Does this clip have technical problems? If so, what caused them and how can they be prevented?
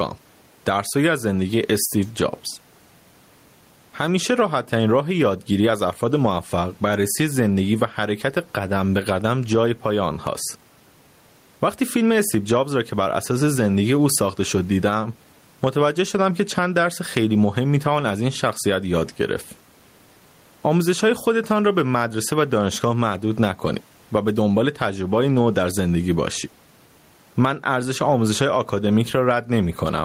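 Yes. Gain pumping runs throughout: input gain was likely set far too high, so a fast limiter pulls the level down roughly ten decibels on each loud sound. The room noise sits about 41 dB below the speech, and the speech is left squashed. To prevent it, lower the microphone gain so peaks sit well below the limiter threshold.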